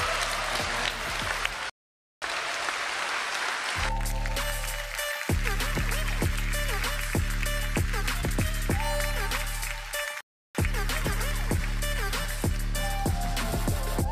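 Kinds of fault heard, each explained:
Rebuffering stall: the player drained its downloaded audio and just sat waiting for more. You hear it twice, a silent gap from 1.70 to 2.22 s and another from 10.21 to 10.55 s, and each time the sound picks up exactly where it stopped, adding about half a second and a third of a second.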